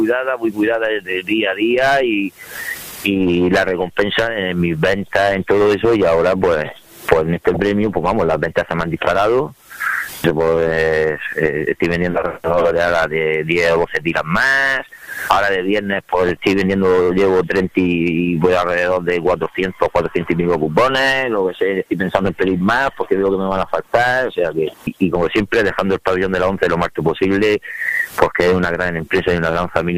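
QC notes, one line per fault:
7.45–7.60 s, 16.26–16.47 s, 29.02–29.18 s: DAB burbling. Brief watery noise blips over the sound. Residual bit errors corrupt MP2 scale factors and samples, so single sub-bands jump in level for up to a frame. On the spectrogram this shows as scattered rectangular band-blocks. The waveform shows jagged bumps. This points to a low error rate and roughly eight to ten frames hit per burst.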